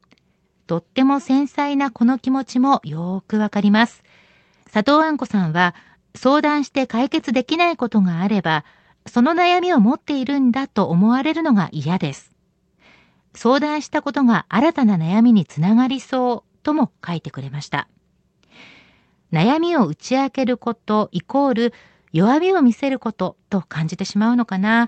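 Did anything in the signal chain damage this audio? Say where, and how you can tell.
No, nothing in the chain has damaged this speech. It has gone through a working WebRTC call path, and the top of the spectrum stops at about 8 kHz with the usual coding noise, which fits the Opus codec running normally at around 32 kbps.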